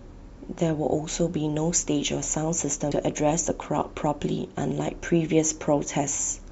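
At 2.90 s the speech is interrupted by a very brief glitch, heard as a chirp, click or short hole. This is damaged data in a compressed stream: corrupted bytes made the decoder misread a frame, lose sync and hunt for the next valid frame header.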